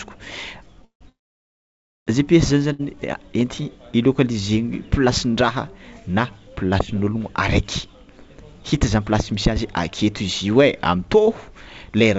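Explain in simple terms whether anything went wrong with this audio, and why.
Packets were most likely held up on the network, causing a call audio freeze twice, from 0.85 to 1.03 s and from 1.09 to 2.09 s. The speech stops, fades into near-silence, then resumes where it left off, so nothing is lost.

At 2.73 s one packet arrived late, causing a short stall from a late packet. The last sound is stretched by about 60 ms before the speech carries on.

From 8.54 to 9.51 s, just before "azy aketo izy", a jitter buffer speed-up trimmed tiny slivers to catch up. The speech plays about 6% faster at the same pitch and sounds slightly hurried.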